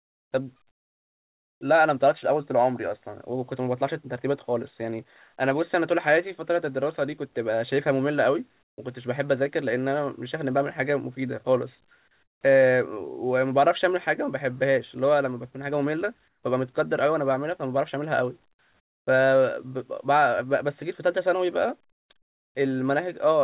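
Speech over a narrowband call path, with nothing above 4 kHz. In six pauses, at 0.00–0.32, 0.71–1.61, 8.63–8.78, 12.23–12.41, 16.28–16.43 and 18.80–19.07 s, the background becomes a steady, featureless hiss, likely comfort noise in place of the background during discontinuous transmission. Its level jumps by about −23, −11, +10, −20, −7 and −13 dB. A spectrogram shows flat, textureless blocks with hard edges, and the waveform shows abrupt steps in the noise floor.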